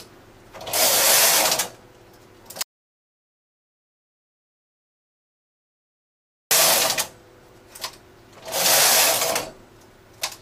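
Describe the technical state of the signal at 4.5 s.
At 4.5 s you're right in the middle of an audio dropout to silence running from about 2.63 s to 6.51 s, so close to 3.9 s of the signal is simply gone. The sound cuts off abruptly and picks up again mid-flow, and the gap is silent with no room tone at all. The likely cause is the input vanishing for a moment while the recorder carried on writing silence.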